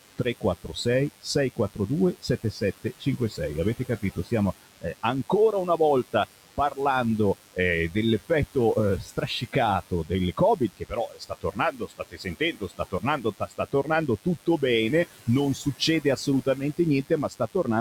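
Throughout the clip a DECT cordless phone buzz sits roughly 15 dB below the speech. Rectified 10 ms radio bursts produce a thin 100 Hz drone, seen as evenly stacked horizontal harmonic lines on a spectrogram.

Noise suppressor artifacts also persist throughout. Between phrases, the background, including the room noise, is pulled down by about 18 dB.

Speech cut by the noise suppressor occurs at 0.01–3.4 s, 3.75–6.78 s, 7.34–7.58 s, 7.9–14.63 s and 15.05–17.67 s. Soft consonants and word endings drop by up to about 19 dB, appearing as abruptly shrunken waveform tails and missing fricative energy high in the spectrogram.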